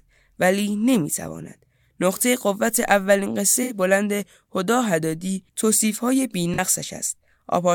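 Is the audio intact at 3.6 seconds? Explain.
No. From 3.63 to 3.74 s there is a corrupt frame concealed: flipped bits in the AAC stream were detected and the decoder patched over the damage itself. The concealed span lasts about 0.11 s and covers three damaged frames.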